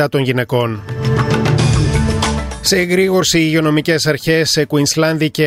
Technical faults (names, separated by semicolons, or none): compressed frames skipped